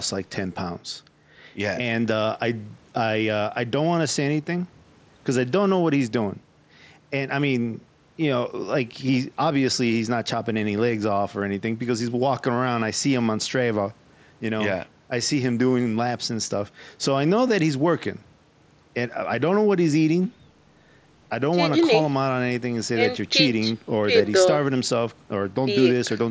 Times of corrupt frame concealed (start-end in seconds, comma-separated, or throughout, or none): none